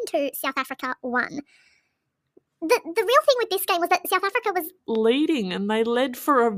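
Speech, with a section at the wrong speed from 0.0 to 4.79 s, played 1.5 times fast, so the voice sounds hurried and pitched up by about seven semitones, likely from playback against the wrong clock. A spectrogram shows harmonics spaced wider and set higher, dropping back abruptly at 4.79 s.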